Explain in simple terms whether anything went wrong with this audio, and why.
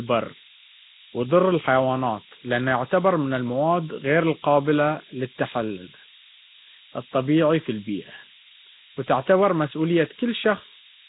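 A steady, thin hiss, almost as loud as the speech, runs through the whole recording and sharpens toward the top. That is low bit depth with noise shaping: the sound fits about 4 bits, with the rounding error pushed upward.

The speech also sounds rough, watery and smeared, with nothing above 3.8 kHz. The likely cause is heavy Nellymoser compression, the old Flash microphone codec.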